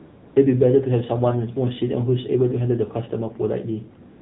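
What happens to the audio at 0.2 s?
At 0.2 s the sound is AMR comfort noise, which runs from the start to 0.36 s. The phone treated this stretch as silence and sent no speech frames. The receiver filled the gap with synthetic noise built from a rough level and spectrum. The real background is replaced by a smooth, steady hiss that switches off abruptly when speech frames resume.

Throughout, including this moment, the AMR narrowband mobile codec is plainly audible. It samples at 8 kHz, so nothing above 4 kHz survives. The speech comes out buzzy and synthetic, which fits a low rate of about 7.4 kbps.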